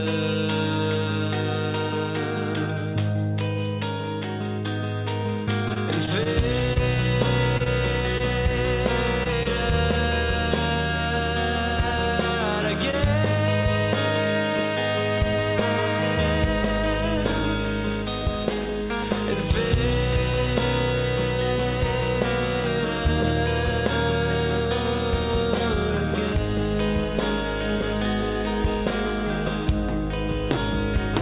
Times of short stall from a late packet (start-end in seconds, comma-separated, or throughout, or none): 12.91-12.95, 13.61-13.80